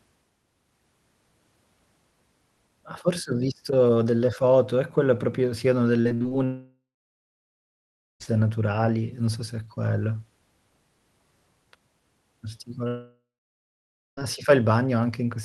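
From 6.01 to 6.33 s the speech turns choppy, with five short holes, the longest 60 ms, and about half that stretch patched over. This is repeated packet loss (robotic sound): packets kept failing to arrive, and each gap was filled by stretching the last sound.

From 6.45 to 8.22 s the audio smears into a fading buzz, then goes silent for about 1.4 s before resuming at "naturali non so se". The same happens from 12.88 to 14.23 s, with roughly 0.9 s of silence. Both are likely a long network dropout, with the missing audio never recovered.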